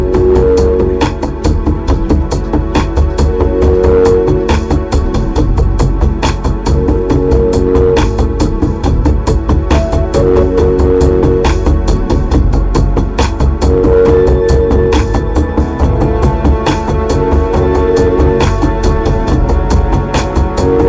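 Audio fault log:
No faults logged; the audio went over an ordinary call link, and the absence of anything above 8 kHz fits a G.722 wideband codec.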